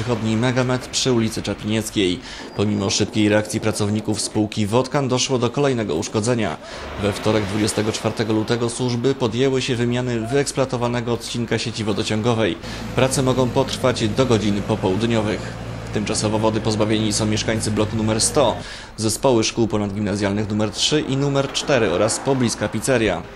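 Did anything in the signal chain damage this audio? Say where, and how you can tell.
No, nothing in the signal chain damaged this audio.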